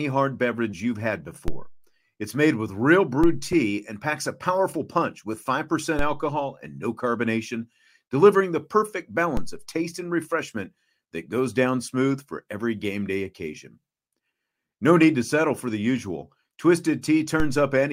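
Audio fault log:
1.48, 3.24, 5.99, 9.37 and 17.4 s: DC step. Five times the waveform's zero line jumps abruptly by about -14 to -15 dBFS, then drains away through a high-pass near 2 Hz, which fits an offset switching in that a coupling stage gradually blocks. Each jump is heard as a low thump, after "hard beverage you've had", between "made with real" and "tea and packs a", and just before "alcohol and no carbonation".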